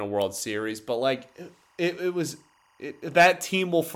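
A speech clip with timecode bleed from 1.16 to 3.23 s: a chirping warble near 1 and 2 kHz, roughly 40 dB below the speech, showing as stacked spectrogram lines.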